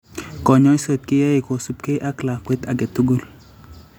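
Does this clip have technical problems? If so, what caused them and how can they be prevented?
No, there are no technical faults to report in this speech recording, so there is nothing to trace back or prevent.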